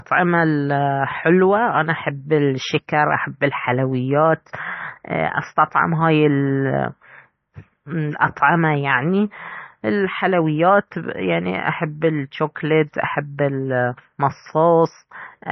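Heavy lossy encoding, likely MP3 compression at a very low bitrate, roughly 28 kbps, affects the whole of this speech recording. Starved of bits, the encoder has discarded everything above 6 kHz, so the treble is flat and dull, and it has zeroed the weaker frequency lines, which flicker in and out from frame to frame. The result is a watery, swirling texture on the speech, with metallic chirping on s sounds and smeared attacks.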